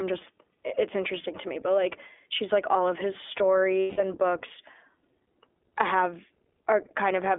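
Throughout, the iLBC codec limits the speech to roughly 300 Hz to 3.5 kHz, coding each frame independently, which fits the 15.2 kbps mode, and leaves it audibly rough and synthetic.

Lost iLBC frames from 3.81 to 4.01 s: the decoder fills the missing 0.18 s by repeating the last pitch cycle with noise, heard as a held, buzzy vowel before the voice returns almost at once.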